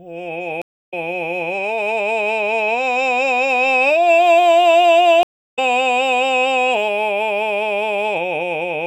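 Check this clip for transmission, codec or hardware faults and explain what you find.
The music has two stream reconnects. At 0.62 to 0.94 s and 5.23 to 5.59 s the connection dropped, leaving about 0.30 s and 0.34 s of silence. A fresh decoder then resumed the music roughly 0.2 s and 0.3 s further on, skipping that material.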